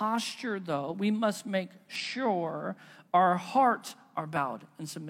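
At 1.95 to 2.00 s, just after "though we must make", and again at 4.32 to 4.38 s, following "our hearts", the speech is interrupted by a short glitch of about 50 ms. Both come from damaged data in the compressed stream. Corrupted bytes in those frames leave the decoder unable to interpret them, so it loses frame sync while it searches for the next valid header.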